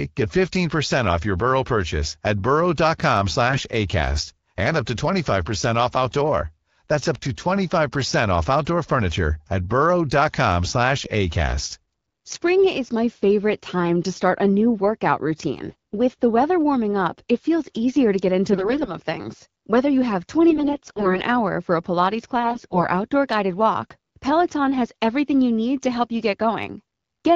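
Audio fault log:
3.50–3.62 s, 15.69–15.94 s, 18.52–18.92 s, 20.50–21.22 s and 22.40–22.84 s, AMR bit errors: over the light AMR-WB coding at 12.65 kbit/s, these stretches turn hoarse, scratchy and gargly while pitch and level hold. Flipped bits, heaviest at 18.52 and 20.50 s and lightest at 22.40 s, scatter the excitation pulses and skew fine gain and spectral values. A spectrogram shows smeared, broken harmonics with noisy fill; the waveform keeps its envelope but looks jagged.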